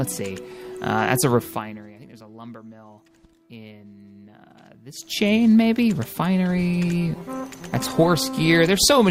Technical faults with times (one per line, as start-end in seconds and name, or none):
6.51-9.11 call bitrate drop